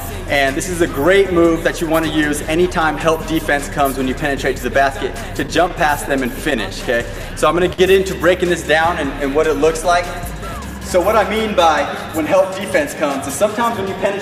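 Between 5.07 and 7.33 s the audio picks up a scatter of brief ticks and small smears, about ten in all, none longer than roughly 15 ms. These are scattered short gaps: lost or late packets, each patched by extending the preceding sound, adding up to around a tenth of a second.

At 7.73 s the sound hangs for a moment, held slightly too long, before carrying on at 7.80 s. This short stall from a late packet left the jitter buffer empty, so the receiver stretched the last audio for 53 ms until the packet arrived, adding that much delay.

From 11.68 to 12.47 s the audio sounds hurried, running about 5% fast while keeping its pitch. This jitter buffer speed-up trimmed short pitch-period slices again and again, roughly 40 ms in total, to draw down excess buffered delay.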